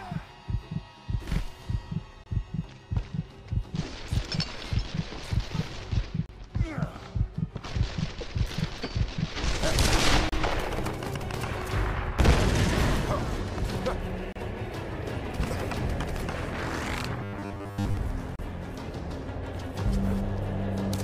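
Separately encoded pieces were joined without trimming encoder delay and padding, so gaps at a join of encoded pieces open every 4 s: about 23 ms at 2.24 s, then 32 ms at 6.26, 10.29 and 14.32 s, briefly cutting the sound. From 17.23 to 17.97 s, the likely cause is too-seldom buffer delivery with repeated short buffers, replacing most of the audio with a rigid 100 Hz robotic buzz. Another 32 ms join gap follows at 18.36 s.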